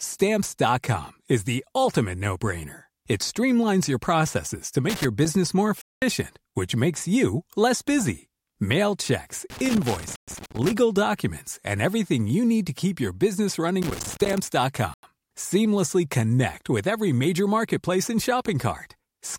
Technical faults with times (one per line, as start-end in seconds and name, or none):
4.89-5.26 loose connector crackle
5.81-6.02 Bluetooth stall
9.50-10.73 loose connector crackle
10.16-10.28 Bluetooth stall
13.82-14.38 loose connector crackle
14.94-15.03 Bluetooth stall